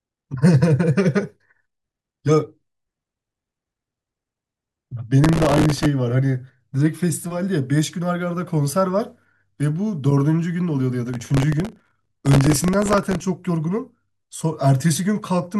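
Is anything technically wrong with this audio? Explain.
Yes. Processor overload crackle appears twice in this speech, from 5.24 to 5.86 s and from 11.14 to 13.21 s. The processor kept missing deadlines on very short buffers, around a millisecond and a half judging by the fine grain, and each miss replayed a sliver of old audio with hard edges. Dozens of these in quick succession produce a gritty, tearing crackle riding on the speech. Unlike a single dropout or click, it comes as a burst, then stops cleanly when the load eases.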